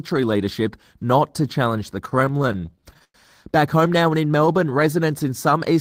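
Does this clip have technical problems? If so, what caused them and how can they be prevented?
Yes. Repeated stalls (stutter) run from 2.05 to 3.16 s, just after "not to challenge the". Packets arrived late, so the jitter buffer kept emptying. About twenty short stalls, up to 100 ms each, were filled by stretching the last sound. Nothing is lost, but the speech drags. A larger adaptive jitter buffer and a steadier network path would prevent it.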